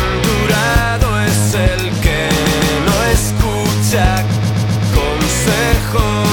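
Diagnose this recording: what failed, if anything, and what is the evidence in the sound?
Repeated frames in the compressed stream: a run of already-encoded frames was written or delivered more than once, so the decoder plays the same stretch again. Around 2.44 to 2.76 s, a block of about 0.16 s repeats twice more, a stutter adding 0.31 s. From 4.35 to 4.87 s, a shorter block of about 0.13 s loops four extra times, adding 0.52 s. Each block length fits a run of several codec frames.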